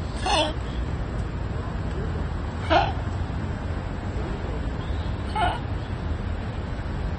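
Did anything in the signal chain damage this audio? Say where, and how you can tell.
Yes. AAC compression runs through the whole clip, and the damage is plainly audible. The stage is the codec. Nothing is left above 9 kHz, so the sound is dull, and its texture is smeared and fizzy. The likely cause is an AAC-LC encoder running short of bits, which fits a bitrate around 32 kbps. The encoder lowered its cut-off and quantised the remaining bands coarsely against its hearing model. That leaves spectral holes that warble over time.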